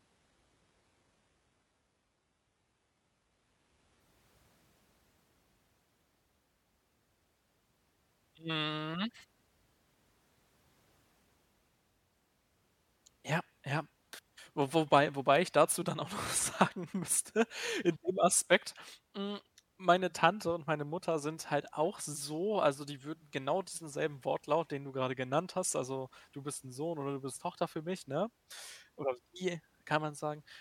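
From 0 to 4.0 s the player is on an adaptive stream starting at a low bitrate, which fits 12 kbit/s HE-AAC, before stepping up to what sounds like 96 kbit/s AAC-LC. Until the switch, the speech has nothing above 11.3 kHz and heavier codec artefacts. Quality then improves suddenly, with no gap.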